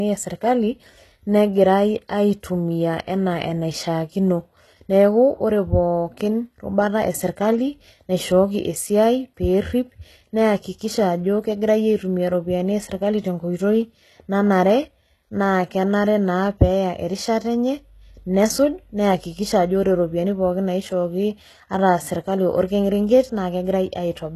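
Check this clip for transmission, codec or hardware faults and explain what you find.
One fault runs through the whole clip: clearly audible codec damage, likely from HE-AAC compression.

HE-AAC compression, throughout: the codec keeps only the lower spectrum and synthesises the treble by copying lower bands upward and shaping them with a coarse envelope. Here nothing survives above 12.3 kHz, and the damage is plain, which fits a low bitrate of about 16 kbps. Because the rebuilt treble is not the original, harmonics no longer line up across the crossover, so s sounds come out gritty, metallic or lispy.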